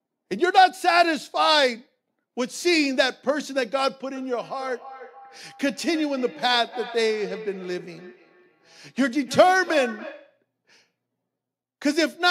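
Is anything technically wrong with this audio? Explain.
Yes. From 4.15 s to 10.45 s there is feedback echo between two devices: a second device in the same room plays back what this microphone sent, and the microphone picks it up again, which its own echo canceller cannot remove. Each word returns roughly every third of a second, thinner and ringier, peaking about 16 dB below the speech. A waveform shows a trail of smaller copies after each burst, and a spectrogram shows faint, evenly spaced repeats.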